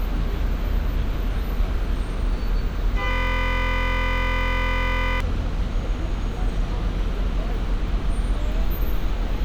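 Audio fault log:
3.11–5.20 s, system hang loop: a 23.22 ms slice of the sound repeats exactly, about 90 times, so for roughly two seconds the audio becomes a steady, rough buzz at 43.1 Hz. The computer or driver stalled while the sound hardware kept replaying the same stretch of its ring buffer. That loop length fits a 1024-sample buffer, and a loop this short fuses into a tone at its repeat rate rather than a stutter.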